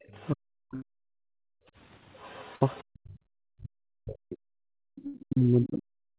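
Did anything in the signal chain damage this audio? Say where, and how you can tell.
Yes. Call processing lets the other side's voice through, faint, at 0.0 to 0.3 s, 2.19 to 2.84 s and 4.96 s to the end, at about 30, 25 and 20 dB below the talker. This is likely residual loudspeaker echo the canceller failed to remove. A spectrogram shows a second, weaker harmonic pattern underneath.

Speech suppressed in double talk, also at the call-processing stage, runs from 0.34 to 1.33 s and from 2.88 s to the end. The talker dips and breaks up by up to roughly 40 dB, likely because the canceller turned everything down while both sides spoke. The waveform envelope shows sudden troughs.

Bursts of packet loss on the network occur at 0.75 to 0.83 s, 2.56 to 2.62 s and 5.07 to 5.15 s, each removing 50 to 70 ms. The jitter buffer held and faded the last sound, so you hear a brief buzz or hiss and then a jump ahead. 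On a spectrogram these appear as smeared, flat horizontal streaks.

Background gating by the echo canceller drops the room sound at 1.61 to 1.77 s by about 29 dB and at 4.69 to 4.96 s by about 40 dB, and it returns once the canceller lets go. On a waveform the noise floor collapses into a near-silent notch, and the spectrogram shows a dark vertical gap.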